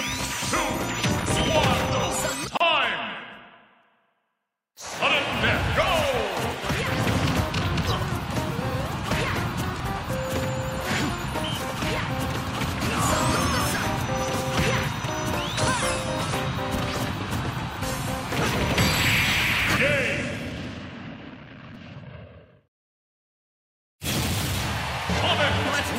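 A background task stalling the USB bus or audio driver about once every 1.0 s causes periodic USB or driver dropouts from 0.82 s to 25.74 s. Around thirty times, roughly 4 ms of audio is skipped outright, leaving evenly spaced ticks wherever there is signal. Separately encoded pieces joined without trimming the encoder delay and final-frame padding leave a gap at a join of encoded pieces from 2.57 to 2.60 s. It is a 32 ms gap with smeared edges, after which the sound resumes where it stopped.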